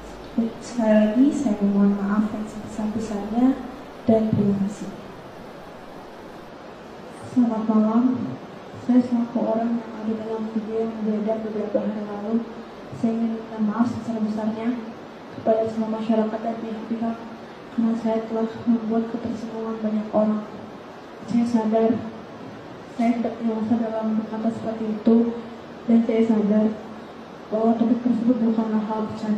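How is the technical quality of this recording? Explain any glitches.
No audible glitches or faults.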